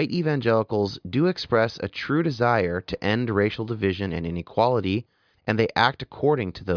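No technical faults can be heard anywhere in the speech.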